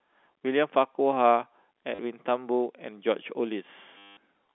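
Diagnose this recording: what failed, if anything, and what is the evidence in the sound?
Network stage: packet loss with last packet repeated. A brief stutter at 1.95 to 1.99 s lasts 40 ms, and a longer robotic buzz runs from 3.98 to 4.17 s for 190 ms. The receiver replayed the last packet until new data arrived, and the buzz sits near 100 Hz, which fits 10 ms packets. The G.711 telephone band around it is intact.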